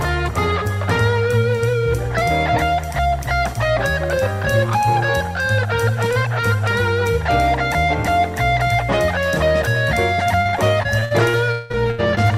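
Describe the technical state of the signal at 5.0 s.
At 5.0 s the signal is intact, with no audible technical fault at that moment.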